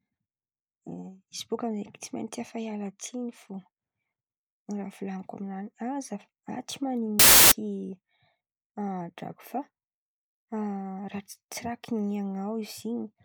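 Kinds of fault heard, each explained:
Samples built from the wrong bytes: loud, harsh broadband noise replaces the speech from 7.19 to 7.52 s, because misassembled bytes let fast-changing low bits dominate each sample value.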